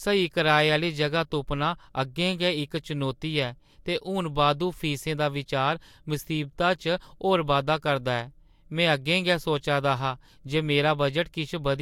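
A short recording of speech, with nothing technically wrong to report. No fault can be heard at any point, so there is no time or cause to give.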